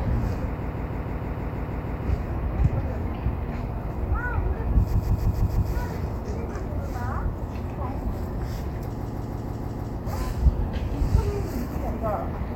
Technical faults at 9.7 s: repeated frames

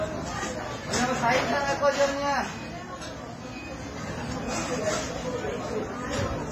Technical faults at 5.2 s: WMA compression

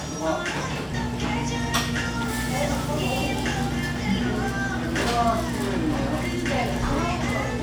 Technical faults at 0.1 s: none

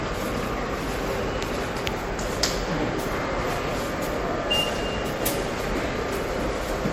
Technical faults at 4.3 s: generation loss

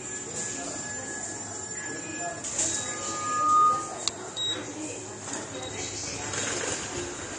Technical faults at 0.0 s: AAC compression

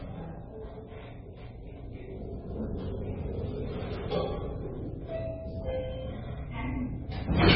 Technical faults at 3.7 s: MP3 compression

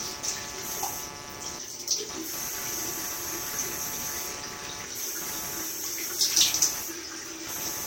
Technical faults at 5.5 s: computer activity noise

